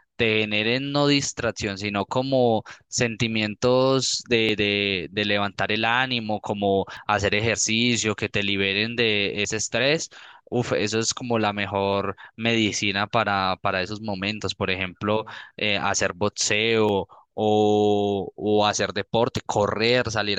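Speech with brief skips at 2.01, 4.49, 6.97, 9.45, 11.93, 14.41, 16.89 and 19.37 s, each about 20 ms, likely audio missing between chunks of 2.5 s.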